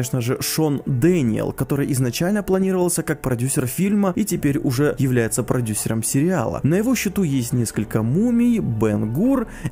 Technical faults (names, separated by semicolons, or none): none